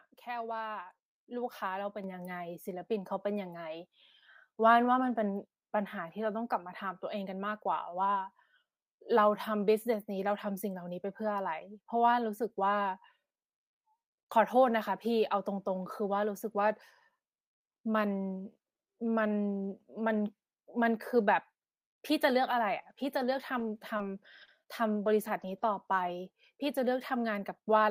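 At 2.04 s there's a microphone volume step-up: the call software decided the mic was too quiet and bumped the input gain by about 4 dB in one go, so the speech and the room behind it jump louder together.

Between 22.51 and 26.10 s you get scattered short gaps, roughly three tiny dropouts, the longest around 20 ms, which points to a few lost or late packets. The receiver papered over each by stretching the last bit of sound, so you hear small ticks or smeary hiccups.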